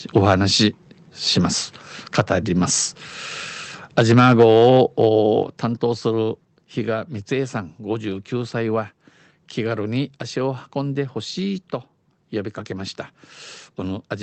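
At 5.43 s the speech and the background noise beneath it drop together by about 6 dB in a single step and stay there. This is likely a microphone volume stepped down by the call software. Unlike a compressor or gain control gradually riding the level, nothing recovers or pumps afterwards.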